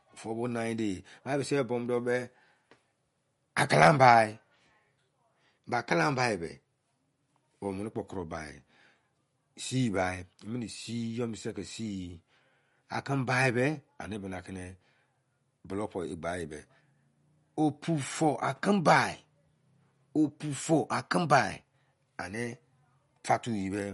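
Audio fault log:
Throughout, MP3 compression: nothing sounds above 11.2 kHz, and weak spectral detail flickers on and off between frames, giving the speech a plainly audible watery swirl. It is likely a bit-starved MP3 encode, fitting about 48 kbps. A plain low-pass filter would dull the top without the swirl.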